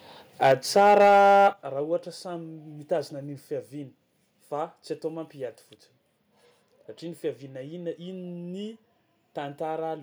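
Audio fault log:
0.42–1.48 s, microphone overload: loud peaks flatten into a harsh crackle, likely from input gain driving the converter about 5 dB past full scale, clipping roughly a tenth of samples.
0.52 s and 1.53 s, microphone volume stepped down: speech and background drop abruptly by about 4 dB, then about 10 dB, likely software cutting input gain after detecting clipping.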